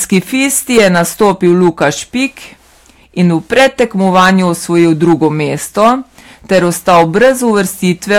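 A speech recording with hard clipping throughout. The signal is driven about 9 dB past what the stage can pass, so a few percent of samples are flattened at the stage's limit. The squared-off peaks add high harmonics, heard as a gritty crackle on louder syllables.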